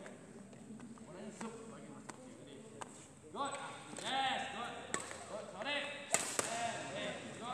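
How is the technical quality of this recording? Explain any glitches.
No technical glitches are audible anywhere in this recording.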